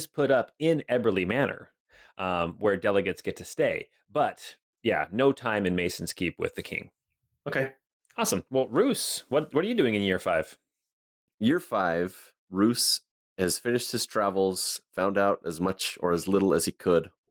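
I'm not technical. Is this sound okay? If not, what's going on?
No. There is clock drift between sender and receiver: the sending device's audio clock runs roughly 4 percent faster than the receiving one, so speech arrives a little quicker than it is played out and the waiting store of incoming sound keeps filling up.

To keep up, the receiver makes repeated timing corrections from 0.09 s to 17.17 s, snipping out short pieces so the speech plays at 104 percent of normal speed. The cuts are unevenly spaced, heard as small hiccups or an unsteady pace.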